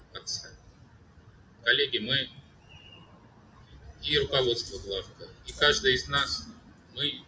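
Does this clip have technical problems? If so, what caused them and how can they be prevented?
Yes. A noise suppressor built for speech was applied to sound that isn't speech. Throughout the clip it treats sustained and ambient parts as noise, so the level swings by roughly 20 dB. Unlike a level-driven gate or compressor, it responds to steadiness rather than loudness. To prevent this, switch off noise suppression, or use a music mode, when sending anything other than speech.

The sound is also cut by the noise suppressor at 0.58 to 1.64 s, 2.40 to 2.71 s, 3.06 to 3.73 s and 6.64 to 6.95 s, dipping by up to about 6 dB. These are dips, not the full silences of a dropout. Disabling suppression for non-speech material prevents them as well.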